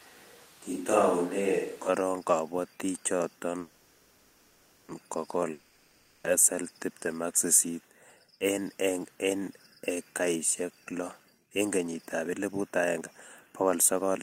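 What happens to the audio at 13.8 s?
A jitter buffer speed-up runs from 13.48 to 14.19 s. The receiver's buffer had built up excess delay, so it cut short pitch-period pieces repeatedly, dropping roughly 150 ms in total. The speech plays about 119% fast at unchanged pitch, sounding hurried.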